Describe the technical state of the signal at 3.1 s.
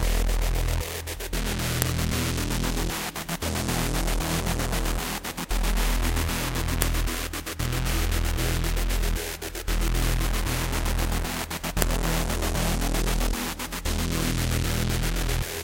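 At 3.1 s the sound is intact, with no audible fault.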